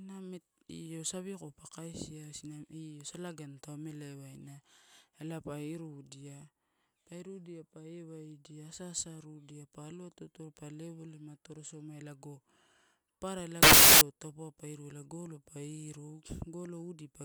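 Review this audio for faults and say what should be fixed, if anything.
From 13.63 to 14.01 s the speech turns into loud, harsh noise: samples built from the wrong bytes. Each sample is assembled off by a byte or in swapped order, so the fast-changing low bits become the bulk of every value. Unlike clipping, the speech's shape is not kept. Fix the reader so that byte order and sample alignment are checked against the stream's format before samples are decoded.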